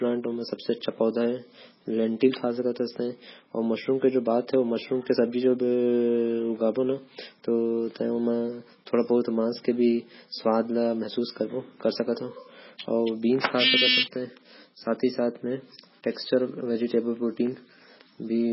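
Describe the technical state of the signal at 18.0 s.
At 18.0 s the speech is still passing through what is likely heavy MP3 compression, present across the whole clip. With too few bits, which fits a rate near 16 kbps, the encoder cuts everything above 5.6 kHz and drops weak spectral lines, leaving dull, watery, swirling sibilants.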